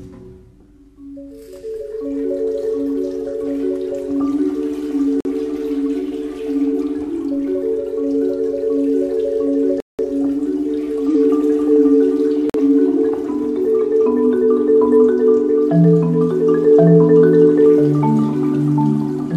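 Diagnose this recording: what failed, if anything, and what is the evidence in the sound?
A steady low drone at 50 Hz runs from the start to 11.91 s, sitting about 35 dB below the programme. This is mains hum from the analogue wiring. A ground loop or nearby transformer lets the power line leak into the signal path before conversion.

Abrupt holes of silence cut in at 5.20–5.28 s, 9.80–10.02 s and 12.50–12.60 s, with timing intact afterwards. These are corrupt frames being muted at the codec stage. Damaged compressed frames were rejected by the decoder, and the player filled each gap, a few frames long, with silence.

At 11.09–11.13 s a short, harsh burst peaks around -10 dBFS. This is a corrupt frame being decoded. Flipped bits in roughly one compressed frame were played anyway, and the misread gains and codes put energy at the wrong frequencies for that frame's length.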